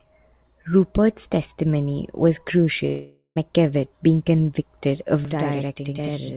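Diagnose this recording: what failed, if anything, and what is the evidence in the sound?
From 2.86 to 3.38 s the sound stops being real audio: the last sound is stretched into a fading buzz, followed by a short silence, and speech resumes about half a second further on with that part missing. This is likely a long network dropout, with the receiver concealing lost packets until the stream returns.

From 5.25 s to the end, every sound has a same-level copy about 85 ms behind it, heard as a doubling or slap echo. This is a channel delay (doubling) at the driver or buffer stage. One channel is held back by a delay that fits a 4096-sample buffer, and the two channels are then summed to mono. The call path's 4 kHz G.711 band limit is audible throughout.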